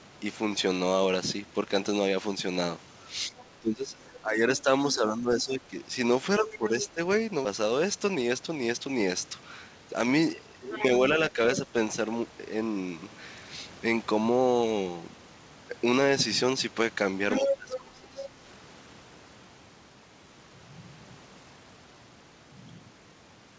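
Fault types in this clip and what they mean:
Speech suppressed in double talk: The talker's level drops while the far side is also audible, most likely because the echo canceller could not tell the local voice from loudspeaker echo and attenuated both. Between 3.31 and 6.99 s the speech dips and breaks up over roughly 1.5 s in total, by about 15 dB at worst. There is a brief dip of about 5 dB near 11.32 s. From 17.40 to 18.29 s the speech sinks by about 20 dB.
Other side's voice leaking through: A second voice sits under the talker, likely loudspeaker playback that the echo canceller failed to remove fully. Short scraps appear at 3.39 to 3.45 s (about 25 dB down) and 4.57 to 4.61 s (about 30 dB down). Longer stretches at 6.47 to 6.85 s and 10.66 to 11.56 s run about 15 dB below the speech. At 17.31 to 17.77 s it reaches about the same level as the talker.
Skip ahead: At 7.45 s playback jumps forward abruptly, with no fill or gap at the join. 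Roughly 300 ms of speech is simply missing, and the audio on either side is butted together almost directly. This is consistent with the receiver discarding a block of queued audio, or losing it in transit, while later packets were already waiting. The end-to-end delay drops by about the same amount.
Jitter buffer speed-up: From 7.64 to 9.07 s the speech runs at about 108% of normal speed with its pitch unchanged, so it sounds slightly rushed. The receiver was holding more audio than its target and trimmed it by cutting out short pitch-period-sized pieces in quick succession. In total about 100 ms was removed across that stretch.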